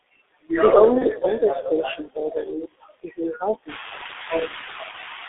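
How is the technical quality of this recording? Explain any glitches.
Poor: the speech is muffled and hoarse throughout, and it breaks up briefly twice.

Throughout, consonants blur and the tone is narrow and boxy. This is the G.723.1 codec at 6.3 kbit/s, passing only about 300 Hz to 3.6 kHz and modelling the voice coarsely.

Also throughout, the background drops away between phrases and swells beneath them. These are noise suppressor artifacts from a frame-by-frame suppressor lowering the noise bands by about 19 dB.

At 0.98 to 1.05 s, just before "older station building", and again at 4.91 to 4.96 s, the sound smears into a brief stretched, fading sound. This is VoIP packet loss concealed by the speech codec: a roughly 30 ms frame went missing each time, and the decoder extrapolated from its last state.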